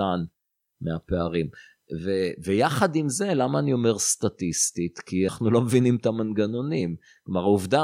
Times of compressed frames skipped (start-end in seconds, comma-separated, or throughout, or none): 5.28